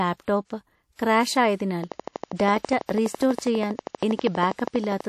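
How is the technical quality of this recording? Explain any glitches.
The recording has two clear problems: plainly audible codec damage throughout, and a regular train of clicks from 1.8 s onward.

WMA compression affects the whole clip. A lossy transform codec, likely WMA at a low bitrate near 48 kbps, spreads quantisation noise across long blocks and drops weak detail, with nothing above 15.5 kHz. The speech sounds ringing and washy. Unlike broadband hiss, the noise breathes with the signal.

A train of clicks runs from 1.84 s to about 5.0 s: roughly forty near-identical ticks at a steady 12.3 per second, peaking around 10 dB above the signal. The likely source is interference or a faulty connection or supply. The even spacing and repeated shape set it apart from random crackle.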